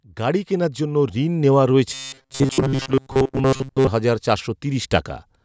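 From about 0.17 s the automatic gain starts rising and keeps climbing until roughly 5.01 s, ending up about 10 dB hotter than where it began. The level control seems to have decided the input was too quiet and pushed the gain up slowly, so the speech and the room noise swell together. There's no sudden jump, just a steady build across nearly the whole clip.

Between 1.94 s and 3.88 s the speech turns robotic, a stiff, metallic buzz locked at 133 Hz that still roughly tracks the syllables. The likely cause is repeated short buffers: fresh audio wasn't arriving fast enough, so the last chunk of about 7.5 ms kept being replayed, and that repetition rate sets the buzz. Most of the real audio in that stretch seems to have been skipped. The call microphone processing is still audible underneath, with the lowest bass taken out as usual.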